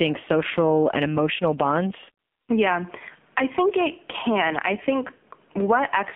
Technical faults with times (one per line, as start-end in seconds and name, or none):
0.00-6.15 AMR narrowband mobile codec